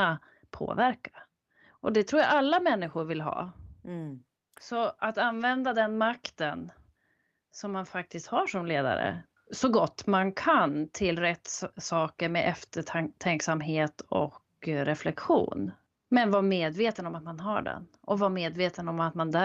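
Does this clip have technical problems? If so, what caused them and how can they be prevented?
Yes. Around 3.31 to 3.41 s and again at 16.65 to 16.71 s there's a brief rough, noisy patch: a lost packet rebuilt from error correction. The next packets carried low-bitrate copies, so there's no gap, just grainier sound. A steadier, less congested network path would prevent it.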